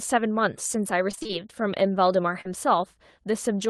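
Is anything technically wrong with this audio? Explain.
Yes, the speech has two packet-loss faults.

Repeated packet loss (robotic sound) runs from 1.11 to 1.31 s. The sound points to five short dropouts, none longer than about 22 ms. Each was patched by extending the preceding audio, so roughly half of that stretch is synthetic fill. The result is choppy, with fragments missing.

Short concealed packet loss occurs from 2.41 to 2.47 s. About 40 ms of audio arrived too late or never arrived. The receiver continued the last sound and then blended back into the real signal, leaving a brief smear or wobble. The call codec's band limit near 12 kHz, which fits Opus at around 24 kbps, applies throughout.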